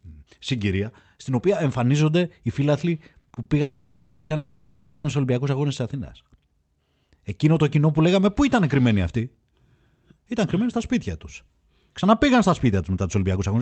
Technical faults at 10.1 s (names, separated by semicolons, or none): jitter buffer speed-up